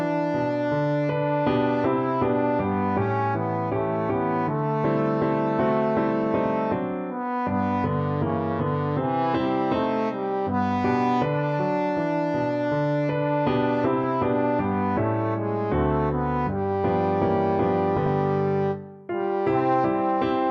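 From 17.96 to 18.07 s, DAB burbling: bit errors slip past correction and corrupt MP2 audio data, producing short blips of noise in single sub-bands, shown as bright, blocky sub-band patches.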